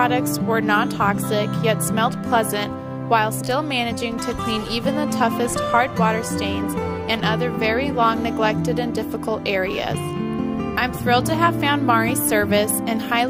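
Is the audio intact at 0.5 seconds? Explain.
Yes, the audio at 0.5 seconds is intact, with no dropout, glitch or other fault at that moment.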